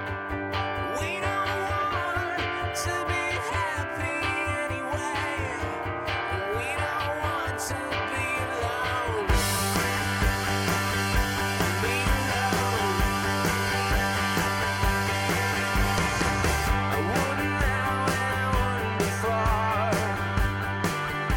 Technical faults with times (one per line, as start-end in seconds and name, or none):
none